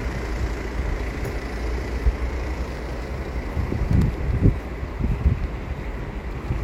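At 2.05 s and again at 4.88 s, damaged data in a compressed stream causes a brief glitch of about 50 ms. Corrupted bytes reach the decoder there. It misreads those frames, loses sync, and hunts for the next valid frame header before the sound resumes.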